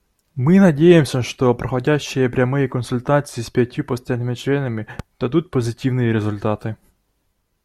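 From 4.99 to 5.02 s, a single loud pop stands a few decibels above the speech, likely a voltage pulse; unlike a dropout, the speech continues underneath.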